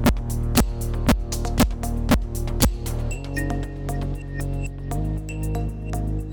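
Integer overflow strikes at 0.06, 0.57, 1.09, 1.60, 2.11 and 2.62 s, about every half second. Each burst lasts roughly 30 ms. Peaks pushed about 1 dB past the integer limit wrap to the opposite sign instead of holding. Each sounds like a violent crack, harsher than clipping.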